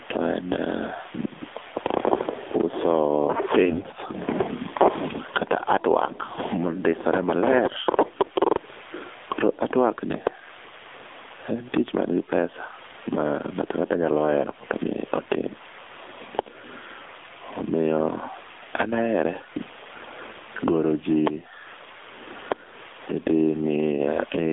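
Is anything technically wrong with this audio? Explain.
Yes. Gain pumping runs throughout. The input gain was likely set far too high, with a fast limiter pulling it down by about 20 dB on each loud sound. The speech sounds squashed.

The whole clip also carries the AMR narrowband mobile codec. Its sparse vocal-tract model and a 300 Hz to 3.6 kHz line band make the speech thin, buzzy and synthetic, which points to a low mode around 7.4 kbps.

AMR bit errors hit from 3.66 to 3.90 s. Flipped, weakly protected bits misplace the excitation pulses, so the speech keeps its pitch and level but turns hoarse and gargly. The burst fits about a dozen 20 ms frames.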